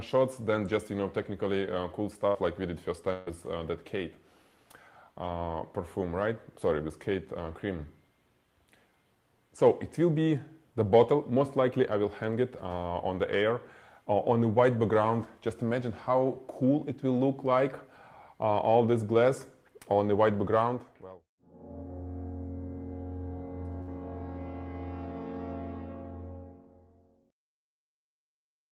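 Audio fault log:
2.27–2.37 s, 3.13–3.32 s, 23.82–23.89 s: burst of packet loss. Roughly 80, 140 and 60 ms of audio go missing, concealed by extending the last sound as a fading buzz or hiss rather than dropping to silence. Playback then resumes further along, unlike a plain dropout.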